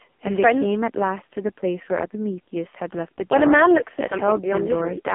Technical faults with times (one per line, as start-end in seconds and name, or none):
0.00-5.14 AMR narrowband mobile codec